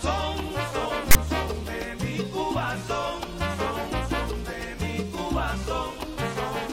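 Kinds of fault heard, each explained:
File tags played as audio: A block of metadata text was decoded as if it were sample data, producing a hard-edged burst of static from 1.11 s to 1.16 s, about 46 ms long. The character bytes come out as a loud, rasping buzz with its waveform pushed toward one side of zero, and the zero padding in the block drops briefly to dead silence before the sound resumes abruptly.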